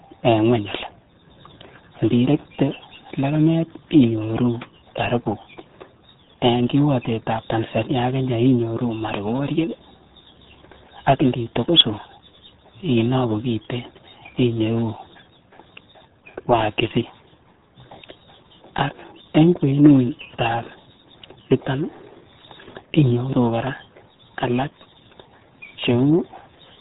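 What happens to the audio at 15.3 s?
RealAudio 14.4 codec damage is present at 15.3 s, as it is across the whole clip. Squeezing the speech into what sounds like an 8 kbit/s stream discards everything above about 3.8 kHz and coarsens what remains, so the speech there sounds muffled, gargly and heavily degraded.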